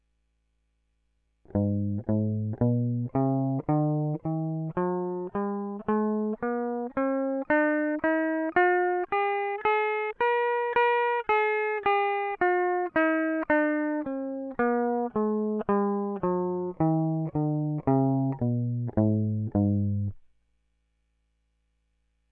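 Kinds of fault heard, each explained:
Wrong sample rate: playback runs slower than the recording rate, so the music drops about 1.5 semitones and slows to 0.92 speed; spectrogram features shift downward and stretch.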